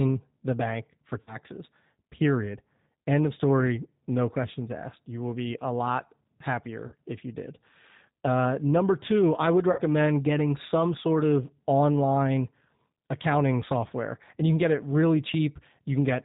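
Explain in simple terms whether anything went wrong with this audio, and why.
Throughout, the speech sounds slightly rough, thin and synthetic, with no crisp high end. That is the G.729 codec, a low-rate phone-call codec that rebuilds the voice from a simple model of the throat and a few pulses, and discards everything above 4 kHz.

Three brief spots turn buzzy or noisy and fade: at 1.21 to 1.37 s, just after "the bank for"; at 6.88 to 6.95 s, just before "if you did"; and at 9.72 to 9.81 s, between "number two I would" and "getting some sort of". This is VoIP packet loss concealed by the speech codec. About 60, 40 and 60 ms of the call went missing, and the decoder stretched the last sound it had to cover each gap.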